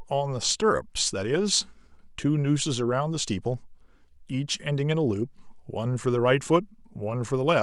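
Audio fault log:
No faults heard anywhere in the speech recording.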